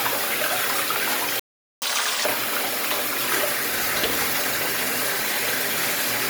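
A playback stall runs from 1.40 to 1.82 s: the sound cuts out mid-flow for about 425 ms, then resumes. The likely cause is the player running out of buffered data, or its thread being blocked, so nothing reached the output until it recovered.

Catch-up at higher speed follows from 1.82 to 2.25 s. The player works through its backlog by resampling at 2.0 times normal speed, so the audio rushes and its pitch jumps roughly ten semitones before settling back to normal.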